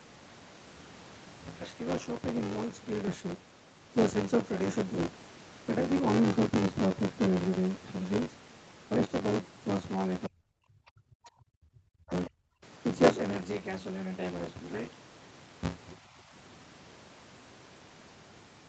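Speech, with a buffer tearing rattle running the whole way: a steady robotic buzz near 94 Hz, which fits a 512-sample buffer where about a third of each period replays audio from roughly 20 ms earlier. At 3.07 to 3.15 s there's a skip ahead: playback jumps forward with almost no gap, losing the better part of a second of speech. From 10.27 to 12.64 s the voice dips hard and breaks up in pieces, falling away by something like 40 dB across about two seconds in total, most likely speech suppressed in double talk as the echo canceller ducked everything while the far side was talking.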